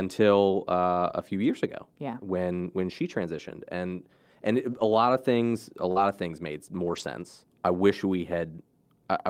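At 1.09–1.11 s, 4.71–4.81 s and 6.84–7.02 s, lost packets were rebuilt from error correction. Low-bitrate copies fill the gaps, so the sound turns briefly rough and noisy, and the spectrogram shows smeared, grainier harmonics. At 5.91–5.98 s a short concealed packet loss extrapolates about 40 ms, heard as a smear. The waveform shows a repeated-looking stretch before a crossfade, with an error-correction rebuild at its tail, 5.96–5.98 s.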